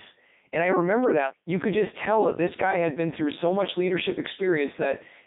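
Codec 2 vocoder damage runs throughout. Only pitch, voicing, energy and spectral envelope survive, rebuilt from sine waves in a 200 Hz to 3.7 kHz band, so speech sounds heavily robotic and buzzy, consistent with the 3.2 kbit/s mode.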